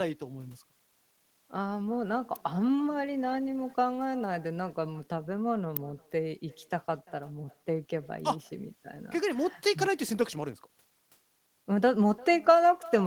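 With no echo canceller at the far end, the loudspeaker's output returns through the microphone, shadowing the speech throughout with a faint copy about 24 dB down, around 0.3 s behind. At 2.36 s and 5.77 s a sharp snap cuts over the sound, likely an electrical switching spike from a nearby switch or discharge.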